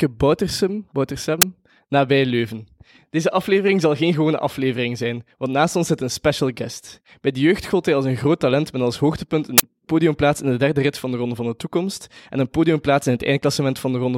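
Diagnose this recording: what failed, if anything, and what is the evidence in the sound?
The failure sits at the driver or buffer stage: an uninitialised buffer was played twice. A brief, loud crack cuts across the speech at 1.42 s, and a longer burst of digital noise runs from 9.58 to 9.63 s. Their lengths, about 12 ms and 46 ms, fit 512-sample and 2048-sample blocks. Leftover memory was output as samples before audio reached it. Unlike a dropout or repeated block, these fill the gap with harsh garbage, not silence or earlier audio.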